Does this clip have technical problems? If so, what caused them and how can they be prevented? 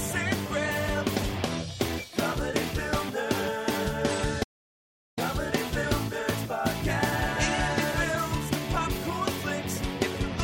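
Yes. An audio dropout to silence runs from 4.44 to 5.18 s. About 0.74 s drops to silence, with no room tone. Likely cause: lost input from a disconnected device or link. Secure cables and monitor input levels during recording.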